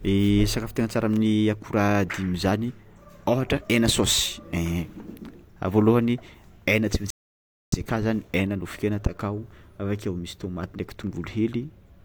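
At 7.10 s the speech hits a rebuffering stall: the player ran dry, went silent until 7.72 s, then picked up exactly where it stopped, adding 0.62 s.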